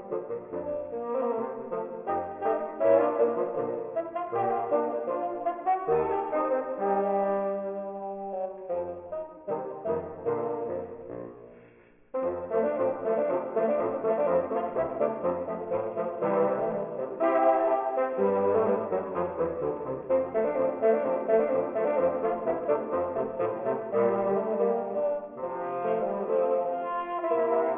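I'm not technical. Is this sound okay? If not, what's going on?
No, there's aliasing throughout: the sound seems squeezed to a low sample rate without filtering first, so anything above about 3 kHz folds back as faint gritty, metallic tones.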